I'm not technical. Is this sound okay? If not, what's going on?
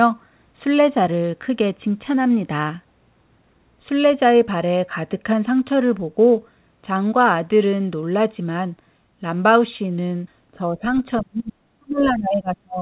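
No. From 10.53 to 11.57 s, and again from 11.78 s to the end, the voice is turned down a long way in patches. This is speech suppressed in double talk, likely caused by the call's echo canceller muting this talker while the other side's audio played.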